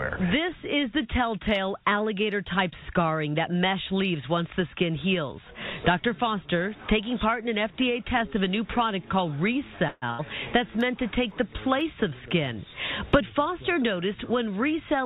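At 9.88 s the sound stops moving forward and the last instant is drawn out as a fading buzz or hiss for about 140 ms, until 10.07 s. Then the audio picks up exactly where it broke off, with nothing skipped. This is a call audio freeze. The likely cause is packets held up in transit, so the jitter buffer ran dry and the receiver filled the wait with a stretched continuation. The whole stream now plays about 140 ms later than before.

Right after that, from 10.11 to 10.21 s, comes a burst of packet loss. Again the last sound is held and faded, here for about 80 ms. This time the audio does not resume where it paused. It jumps ahead, and about 80 ms of the original is gone. That means several consecutive packets never arrived in time to be played, and the receiver could only conceal the hole rather than recover it.

Between 10.81 and 12.31 s there are small, evenly spaced ticks, one every 0.5 s, about four in all. 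They are periodic USB or driver dropouts. At a fixed interval something briefly stalls the audio driver or USB transfer. A tiny sliver of audio, well under a millisecond, is replaced by silence each time. The ticks come from those abrupt cuts in the waveform, and they can only be heard while there is signal under them.

From 13.20 to 14.81 s the audio sounds hurried, running at about 109% of normal speed with its pitch unchanged. This is a jitter buffer speed-up. The buffer had built up more audio than its target, so the receiver trimmed many short pitch-period-length pieces, around 150 ms in total, to bring the delay back down. That compresses timing rather than shifting pitch.

Throughout, the call path's G.711 mu-law coding leaves nothing above 4 kHz, which gives the sound its narrow telephone-band quality.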